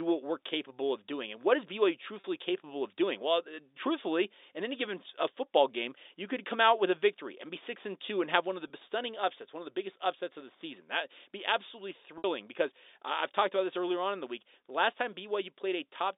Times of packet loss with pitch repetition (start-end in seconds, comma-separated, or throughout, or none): 2.20-2.24, 8.68-8.70, 12.18-12.24